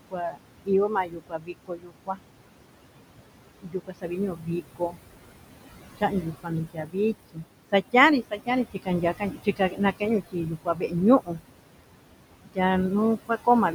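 Noise suppressor artifacts run through the whole recording. The suppressor treats the steady room noise, which sits only about 10 dB below the speech, as something to remove. It pushes those bands down by about 21 dB, frame by frame. The background drops away in the gaps and comes back under the speech.

Speech cut by the noise suppressor happens six times: 0.00 to 2.22 s, 3.60 to 4.99 s, 5.98 to 6.96 s, 7.33 to 11.41 s, 12.45 to 12.58 s, and 13.17 s to the end. The suppressor mistakes quiet parts of the speech for noise and pulls them down with the background, by about 20 to 22 dB at the deepest. The first stretch loses roughly one and a half seconds in total, the long middle stretch about a second. Soft consonants and word endings sound swallowed or faint.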